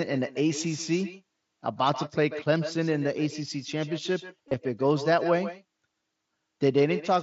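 Throughout, an echo with no canceller shadows the speech: the far end's loudspeaker feeds its microphone, returning a copy about 13 dB quieter roughly 150 ms later. It sounds thin, and on a spectrogram each syllable gets a fainter, delayed smear.

From 4.48 to 4.56 s, concealed Bluetooth headset packet loss fills about 45 ms of missing audio spread over 75 ms, the longest gap 30 ms. Repeated waveform cycles give a brief buzzy tone, visible as evenly spaced horizontal bands before a slight warble as real audio returns. The mSBC headset link's 8 kHz ceiling frames the top of the spectrogram.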